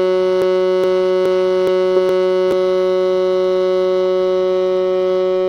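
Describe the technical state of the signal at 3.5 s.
At 3.5 s the music plays through intact, with no audible technical fault at that moment.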